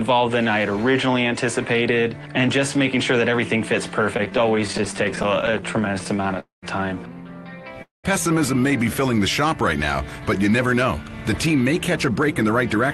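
From 4.17 to 6.38 s the sound drags and stutters, with dozens of tiny hitches, none longer than about 18 ms, adding up to roughly 0.36 s of filled-in audio. These are repeated stalls (stutter): packets kept arriving late, the jitter buffer kept running dry, and the receiver stretched the last sound each time rather than dropping anything.

At 6.40 to 6.64 s and again at 7.82 to 8.06 s the audio stops, trails off into a fading buzz that drops to silence for about 0.14 s and 0.16 s, then resumes where it left off, each gap about 0.2 s long. Each is a call audio freeze, likely from packets held up in transit so that the jitter buffer emptied.

From 10.20 to 11.05 s the audio runs about 7% fast at unchanged pitch, so it sounds hurried, and from 11.47 to 12.78 s about 4% fast. This is jitter buffer speed-up: the buffer held surplus audio, and the receiver trimmed short pitch-period slices, around 70 ms in each span, to cut the delay. 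Throughout, the high end stops near 12 kHz, as expected from the call codec.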